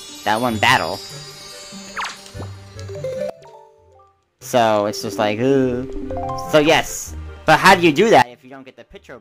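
Sudden gain jumps at 3.30 s (lasting to 4.41 s) and 8.22 s (to the end): the level and background noise drop together, by about 19 dB and about 22 dB, likely from gain applied without a ramp.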